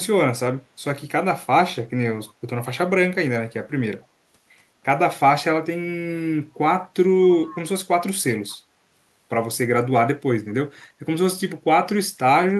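Speech with brief echo leak at 4.02–4.06 s, 7.43–7.56 s and 8.5–8.56 s: a faint delayed copy of the voice, about 227 ms late, loudest at 7.43 s. Unlike room reverberation, it is a distinct repeat at a fixed lag, likely from a loudspeaker echo canceller letting some audio through.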